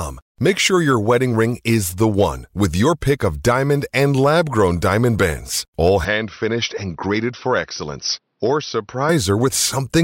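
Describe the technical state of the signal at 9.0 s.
At 9.0 s the recording is still inside an input switch from 6.05 to 9.09 s, likely to a poorer device. Its narrower band cuts everything above 6 kHz, so the speech turns dull and boxy, drops about 5 dB, and gains a faint new noise floor.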